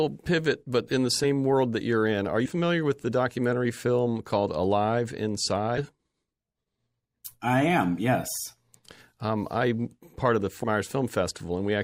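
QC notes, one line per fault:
1.23–1.26 s, compressed frames skipped: between "pivot but in the" and "world that you're in", about 40 ms of speech vanishes. That fits a couple of 20 ms frames dropped. Overlapping frames smear the join into a soft blip.
2.45–2.50 s, compressed frames skipped: just before "with the documentary film", about a tenth of a second is lost. That fits several 20 ms frames gone. The jump is heard as a brief smeared blip, not a click.
5.77–5.83 s, compressed frames skipped: the speech jumps ahead by about a tenth of a second, which fits several 20 ms frames missing. The overlap between frames blurs the join.
10.63 s, compressed frames skipped: right after "I'm part of the", about a tenth of a second is skipped. That fits several 20 ms frames lost. The join is a short smeared blip.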